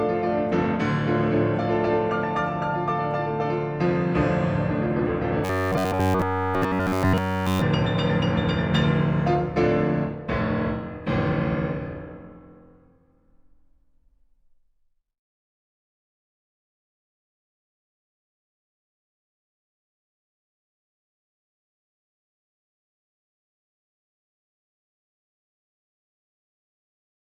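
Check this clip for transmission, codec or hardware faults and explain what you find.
One fault is present: robotic sound from repeated short buffers, from 5.45 to 7.62 s. Over that stretch the sound becomes a rigid, metallic buzz with a fixed pitch of 93.8 Hz. That pitch points to a slice of about 10.7 ms being looped. The likely cause is audio arriving too seldom, so the playback side fills each gap by repeating the last short buffer. Essentially the whole stretch is repeats, and the real audio in between is skipped.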